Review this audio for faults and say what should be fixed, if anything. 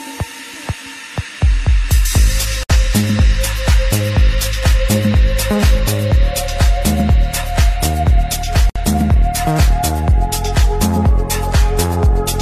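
Two gaps at a join of encoded pieces cut the sound, at 2.63 to 2.70 s (about 62 ms) and 8.70 to 8.76 s (about 60 ms), 6 s apart. Each segment's encoder delay and final-frame padding stayed in, leaving silence with smeared edges. Trim that delay and padding before joining, or encode the audio in one pass.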